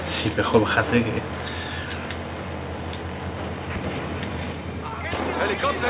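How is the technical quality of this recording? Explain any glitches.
No glitches can be heard: the signal holds together throughout, with the narrowband character of a G.711 mu-law call path at 64 kbps and nothing above 4 kHz.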